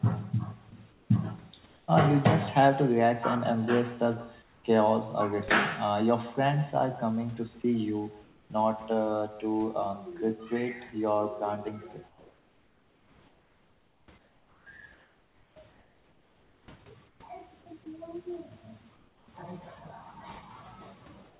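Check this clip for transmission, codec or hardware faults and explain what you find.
Three faults are audible: an echo with no canceller running through the whole clip, short stretches of sound dropped by the voice detector, and comfort noise in place of the background during pauses.

The echo with no canceller is present from start to finish. Every phrase is followed about 150 ms later by a copy roughly 17 dB quieter. The delay matches a round trip through the network after the far end's loudspeaker fed its microphone and nothing subtracted the result. Like the rest of the call audio, which is cut off above 4 kHz as G.711 at 64 kbps would be, the copy sounds thin. Room reverberation would smear the sound continuously, while this echo arrives as a distinct trailing repeat.

Sound dropped by the voice detector occurs at 0.70–0.72 s, 7.62–7.64 s and 17.84–17.86 s. Each time, a sliver of sound about 10 ms long vanishes and is replaced by steady noise for about 20 ms. 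The likely cause is the sender's detector judging the sound to be background and briefly stopping transmission. A packet loss would more typically leave a click, a gap or a concealment artefact, not smooth noise.

Comfort noise in place of the background appears at 0.70–1.10 s, 4.42–4.64 s, 7.62–8.50 s, 12.08–19.28 s and 21.30 s to the end. In the long stretch from 12.08 s, about 4.5 s in all is replaced. The real room noise gives way to a flat, featureless hiss that is about 5 dB quieter at 4.42 s and about 3 dB quieter at the end. This is likely discontinuous transmission, with the receiver synthesising noise during pauses. It differs from a plain dropout because the noise never falls to true silence.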